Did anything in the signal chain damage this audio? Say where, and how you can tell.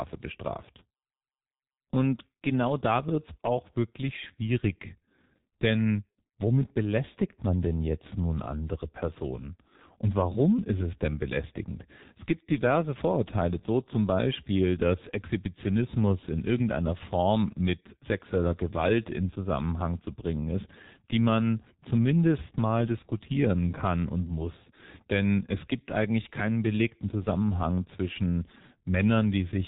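Yes, at the codec stage: heavy G.723.1 coding damages the speech throughout. A spectrogram shows a hard ceiling at 3.8 kHz and consonants smeared across 30 ms frames. The slowly updated voice model leaves speech muffled and hoarse, consistent with about 6 kbit/s.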